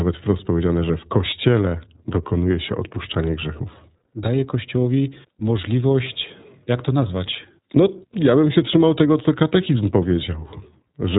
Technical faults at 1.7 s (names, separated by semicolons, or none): iLBC codec